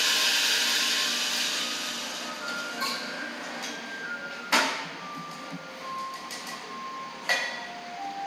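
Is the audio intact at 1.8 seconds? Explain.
Yes, the audio at 1.8 seconds is intact, with no dropout, click or other fault at that moment.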